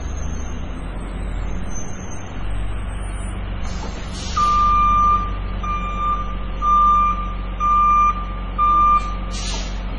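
Throughout, nothing sounds above 10.5 kHz. The sound swirls and turns watery, and attacks smear. This is likely heavy MP3 compression, fitting about 24 kbps.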